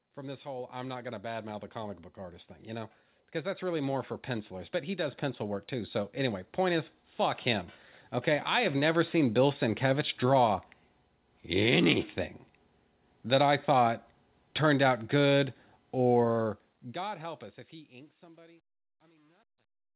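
A speech recording with two problems. From 0.14 s to 7.47 s you can hear automatic gain rising: the AGC decided the input was too quiet and kept pushing its gain up, by about 13 dB in total, so the voice and the background swell together over those seven-odd seconds instead of holding steady. Then there's truncation distortion on the fade at the end. The fade-out starts around 16 s, and from 16.23 s onward the quiet tail turns gritty. From 17.31 s to the end it is at its worst, because the level stage drops bits without dither and the waveform collapses into a few coarse steps, which fits something like a 10-bit gain stage. Everything sits below 4 kHz, consistent with a narrowband call codec such as G.711.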